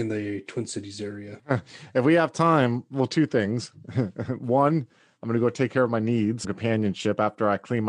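At 6.43 s, just after "take care of my", the speech jumps abruptly forward with a brief blip. This is likely a stream segment skipped, where a failed segment was passed over. Unlike a dropout, there is no silent gap; the sound simply resumes further ahead.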